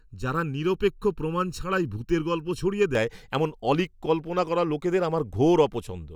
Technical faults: channel delay (comb filtering)

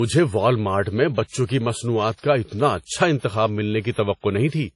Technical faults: transcoding between lossy codecs

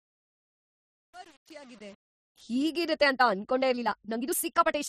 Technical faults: truncation distortion on a fade; time-stretched section

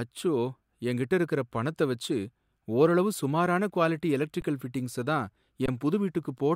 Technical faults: underrun with held sample

